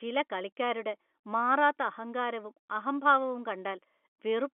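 No technical faults can be heard in the speech, which carries the ordinary narrow band of a G.711 telephone line, running from 250 Hz to 3.4 kHz.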